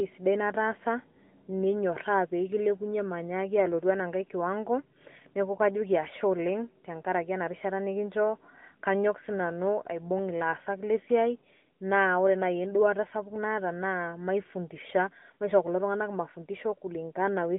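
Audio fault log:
Throughout: AMR narrowband mobile codec, speech band-limited to roughly 200 Hz–3.6 kHz with nothing above 3.8 kHz, and plainly buzzy, synthetic coding consistent with about 10.2 kbps.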